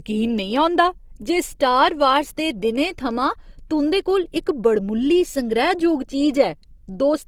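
Throughout the clip, the speech was likely compressed at a low bitrate and then saved again as a high-bitrate MP3. This is low-bitrate audio saved at a high bitrate: the second encoding cannot restore what the first one discarded. The speech keeps the artefacts of the earlier low-bitrate compression, which fits an Opus stream at around 24 kbit/s. Nothing is present above 20.4 kHz.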